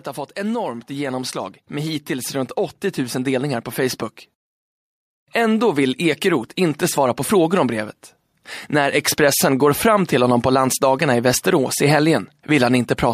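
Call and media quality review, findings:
Automatic gain rising, 0.34–4.07 s: speech and background swell together, about 7 dB. AGC raising gain on quiet input. Waveform envelope ramps up steadily; spectrogram brightens uniformly across all bands.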